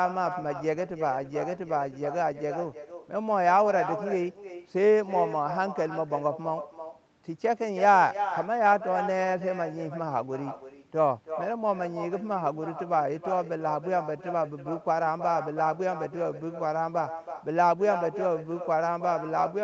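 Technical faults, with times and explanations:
Throughout, echo with no canceller: every phrase is trailed about a third of a second later by a fainter, hollow copy roughly 9 dB down, because the far end's loudspeaker feeds its microphone and the uncancelled sound returns across the network, band-limited near 8 kHz.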